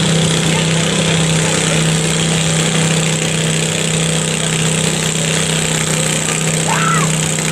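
No technical faults are audible.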